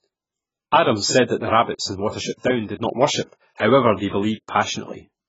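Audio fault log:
throughout, AAC compression: the speech was likely squeezed through AAC-LC at a very low rate, which fits a bitrate of around 12 kbps. With so few bits for each frame, the encoder discards everything above 7.6 kHz and quantises the remaining spectrum coarsely. The band-limit leaves the voice dull and muffled. The heavy quantisation smears consonant edges and gives sustained sounds and sibilants a warbling, fizzy texture.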